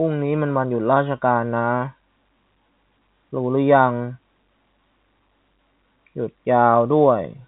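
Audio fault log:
The speech comes through a G.711 A-law telephone channel that works as intended, which fits a 64 kbps path, with the band closing at about 3.9 kHz and any coding noise sitting faint under the signal.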